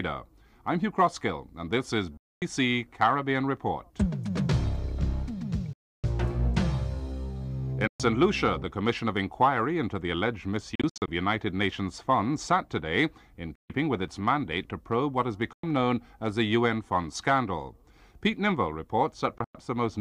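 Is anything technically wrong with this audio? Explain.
Yes. There are seven sharp-edged silences, likely Bluetooth dropouts, at 2.17–2.42, 5.73–6.04, 7.87–8.00, 10.75–11.08, 13.55–13.70, 15.53–15.64 and 19.38–19.55 s. Each lasts about 0.1 to 0.3 s. The gaps at 10.75 and 19.38 s are broken up into shorter holes.

Packets arriving too late at the headphones are discarded, so the output cuts out. When playback returns, it continues from where it would have been had it kept playing, rather than picking up where it stopped. On the waveform and spectrogram, each dropout appears as a blank column with abrupt vertical edges.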